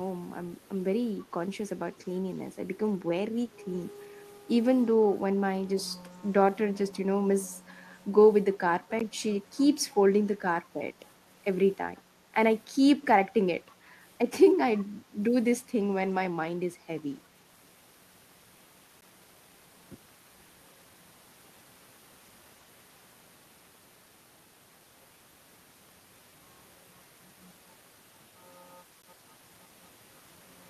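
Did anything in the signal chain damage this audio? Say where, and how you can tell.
Yes. Echo leak in call processing: faint copies of the speech return 315 ms late at 0.63, 11.95 and 14.75 s. Likely a far-end echo canceller missing loudspeaker pickup.

Gap between chunks in storage or playback: hard-edged 13 ms silences at 9.00, 19.01 and 29.02 s. They fall every 10 s, where chunks join.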